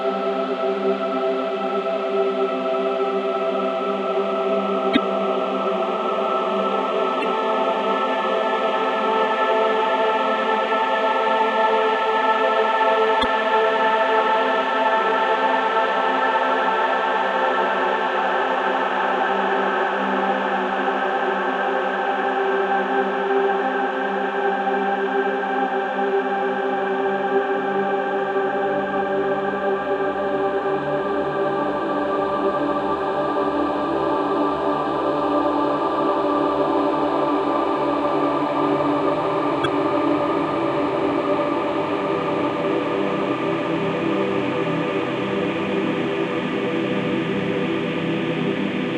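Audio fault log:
4.93–4.97 s, 7.20–7.24 s, 13.21–13.25 s and 39.62–39.66 s: damaged data in a compressed stream. Each time a bad stretch of the file throws the decoder off sync, so you get a brief glitch, about 44 ms long, while it hunts for the next valid frame header.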